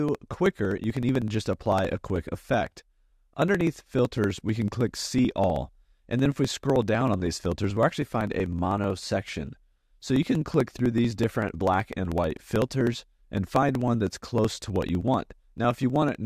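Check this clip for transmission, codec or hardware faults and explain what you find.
One hardware fault: periodic USB or driver dropouts, 0.09 to 16.15 s. About a millisecond is skipped every 0.063 s as the bus or driver stalls, giving steady ticks during signal; unlike random clicks, their spacing never varies.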